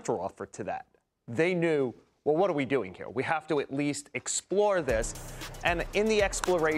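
No technical faults can be heard in this recording.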